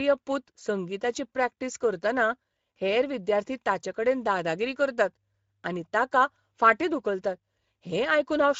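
Speech carries Speex codec damage from start to finish: a hoarse, noisy grain riding on the voice, with the upper band reduced to hissy, shaped fill rather than real detail, which points to a mid-quality setting near 16.8 kbps. Unlike MP3-style swirl, the roughness sits in the excitation itself. At 0.59 to 0.62 s comes VoIP packet loss concealed by the speech codec: the voice smears into a brief, fading extrapolation of itself, consistent with one lost 20 ms frame, and stays weak or distorted just after. A plain dropout would leave silence instead.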